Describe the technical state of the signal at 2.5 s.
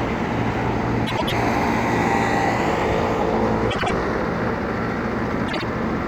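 At 2.5 s the signal is intact, with no dropout, distortion, glitch or other fault to be heard.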